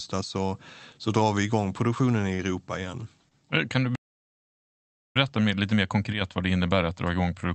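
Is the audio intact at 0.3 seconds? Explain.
Yes, the speech at 0.3 seconds is intact, with nothing beyond the ordinary sound of the call path it passed through.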